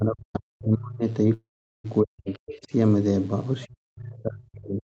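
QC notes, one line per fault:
Throughout, mains buzz: a steady, raspy 50 Hz buzz sits under the whole clip, about 35 dB below the speech. It isn't a clean hum. Sharp switching spikes from something like a dimmer or rectifier, or a missing shield, get in twice per mains cycle, and that spreads harmonics well up the spectrum. That's where the rasp comes from, and it's still audible even though the call path keeps everything below 8 kHz.
0.00–1.03 s, 2.03–2.70 s and 3.67 s to the end, speech suppressed in double talk: in these three stretches the talker dips hard, down by roughly 40 dB at worst. The likely cause is both ends talking at once. The echo canceller couldn't tell its own talker from the loudspeaker echo, so it turned everything down. The last stretch runs right to the end of the clip.
1.33–1.86 s, call audio freeze: the audio stalls for about half a second. The last bit of sound carries on as a fading tail, then there's roughly 0.4 s of near-silence. 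After that the speech picks up exactly where it left off, so nothing is lost, but everything after this point runs about 0.5 s late. That fits packets being held up in transit and the jitter buffer likely running dry.
2.29–2.34 s, other side's voice leaking through: a brief scrap of a second voice slips in, about 30 dB below the talker. It falls inside the second suppression stretch. It's likely far-end audio from the talker's loudspeaker that the echo canceller didn't fully remove from the mic.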